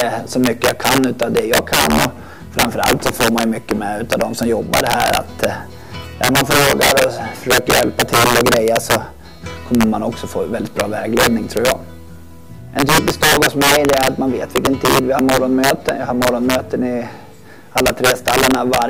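Integer overflow runs through the whole clip: every loud peak produces a violent crack far harsher than ordinary clipping. A gain or summing stage pushed the signal about 8 dB past the integer ceiling. Instead of being held at the limit, those samples wrapped around to the opposite extreme, flipping across the full range. Only a small share of samples, a few percent, go over, but each excursion turns into a sharp spike wherever the sound gets loud.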